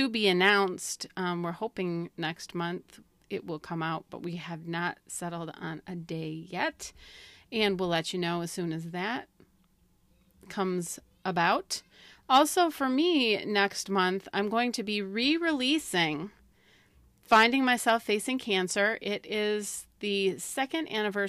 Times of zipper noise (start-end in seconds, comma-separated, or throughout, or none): none